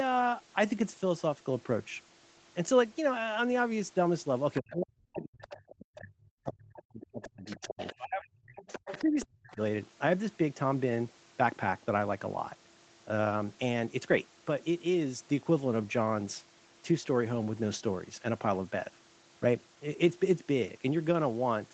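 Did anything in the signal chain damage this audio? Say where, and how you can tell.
Yes. A faint second voice, about 15 to 20 dB down, appears at 4.55–4.76, 5.45–5.99 and 6.75–9.55 s: the other side's voice leaking through, likely past the call's echo canceller.

The main speech sinks by as much as about 40 dB from 4.6 to 8.61 s and 9.02 to 9.6 s. That is likely speech suppressed in double talk, with the canceller ducking both voices together.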